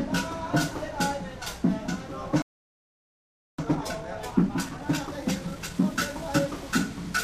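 At 2.42 s the audio cuts to silence in mid-flow and stays silent until 3.58 s, a gap of about 1.16 s. This is a playback stall: the output had nothing to play for that stretch, most likely because the player's buffer ran dry or its audio thread was held up. Sound returns at 3.58 s.

From 3.58 s to 6.58 s the everyday sounds run noticeably fast, at about 1.25 times normal speed, while their pitch stays where it should be. This is time-compressed catch-up. Having fallen behind during the stall, the player works off the backlog by removing short slices of audio and cross-fading across the joins. The result is a hurried pace from those repeated splices, until normal timing resumes at 6.58 s.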